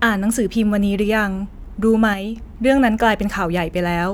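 From 2.14 to 2.36 s the speech abruptly drops about 6 dB, then returns; one channel likely drops out, halving what the mono sum carries.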